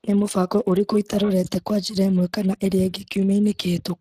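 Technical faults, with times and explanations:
Throughout, Speex codec. The speech sounds plainly hoarse and grainy because the excitation is coarsely coded. Nothing remains above 15.2 kHz. The damage fits about 22 kbps.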